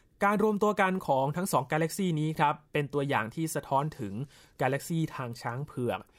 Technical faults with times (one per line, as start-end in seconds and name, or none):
none